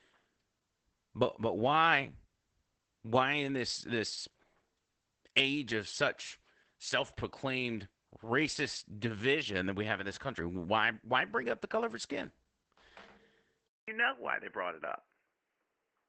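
Throughout, the speech carries Opus voice compression: the SILK coder at 12 kbps in wideband mode, 20 ms frames, leaves the voice muffled, slightly hoarse and robotic from coarsely coded excitation. On a spectrogram, energy stops abruptly near 8.6 kHz, with nothing above.

At 13.68 s the sound drops out for 200 ms, then returns dull and boxy with nothing above 3 kHz, likely because the input switched to a poorer device. The spectrogram shows a gap, then a much lower ceiling. Loudness stays the same, and a faint new noise floor appears far below the speech.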